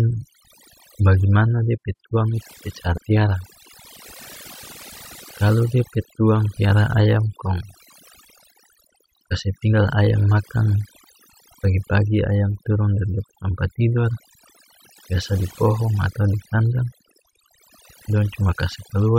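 A speech recording with overdone noise removal throughout: the noise floor has been pulled down, leaving twinkling specks where individual frequency bands flick on and off, and the quieter parts of the voice are stripped away with the noise. At 2.96–2.98 s, right after "pe tuang itu pe", compressed frames are skipped. The audio jumps forward by roughly a tenth of a second, consistent with a few dropped frames of about 23 ms each.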